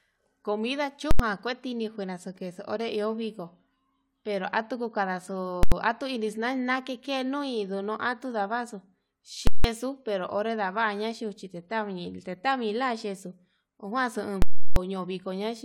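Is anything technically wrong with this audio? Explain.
Yes. Invalid numbers at full scale break into the speech at 1.11–1.20 s, 5.63–5.72 s, 9.47–9.64 s and 14.42–14.76 s. Each time, a calculation produced invalid values that were pinned at full scale for one whole processing block. The lengths of about 85 ms, 171 ms and 341 ms fit blocks of 4096, 8192 and 16384 samples. Each event sounds like a loud pop at its start and end with nothing between. The waveform shows a flat bar stuck at one extreme value, far beyond the speech peaks, and the spectrogram shows bright vertical lines at each edge with a gap in between.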